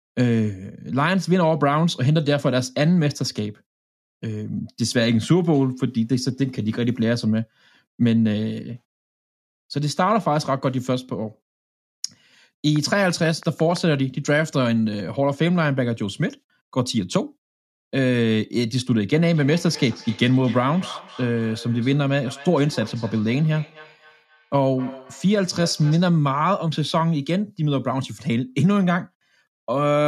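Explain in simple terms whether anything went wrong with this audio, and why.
Two things go wrong in this speech recording.

From 12.76 to 13.95 s there is a train of clicks: about seven sharp ticks arriving at a steady pace of roughly six per second. They all sound alike and keep going straight through the pauses, which tells them apart from the lip noises or crackle a talker makes. That evenness points to something outside the speech injecting pulses, likely electrical interference or a faulty connection or power supply.

From 19.13 to 26.16 s there is a feedback echo between two devices. Each word comes back as a quieter, thinner copy roughly a third of a second later. This happens when a second device in the same room replays the call and the microphone picks it up again. Ordinary room echo is different: it is a smooth blur right after the sound, not distinct repeats at a fixed gap.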